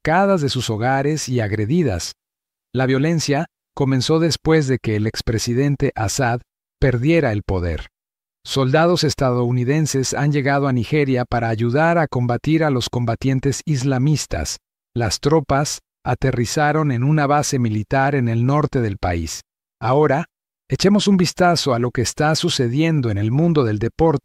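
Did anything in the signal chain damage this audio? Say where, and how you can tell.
No, nothing in the signal chain damaged this audio.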